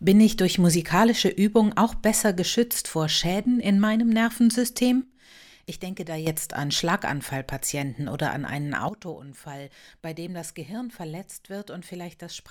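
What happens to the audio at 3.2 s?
At 3.2 s the speech runs on intact, with no dropout, click, distortion or other fault at that point.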